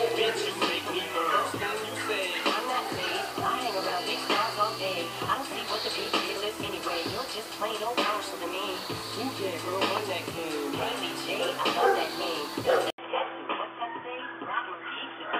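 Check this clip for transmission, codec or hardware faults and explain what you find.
One fault, right at the tail end. At 12.90 s the sound drops out for about 80 ms, then comes back dull and boxy through to the end at 15.39 s, which sounds like an input switched to a poorer device, most likely a fallback mic or a headset's call profile taking over. Nothing gets through above 3.5 kHz after the switch, the level sits around 5 dB lower, and there's a new background hiss roughly 35 dB under the signal.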